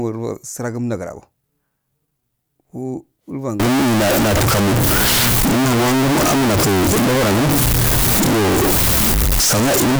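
From 3.6 s to the end, the speech turns abruptly very loud and harsh, close to a square wave at an almost fixed, high level, with background noise as loud as the talker. This is float read as integer, likely 32-bit float samples interpreted as 32-bit integers.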